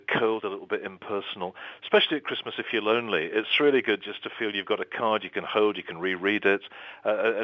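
No technical faults can be heard anywhere in this recording.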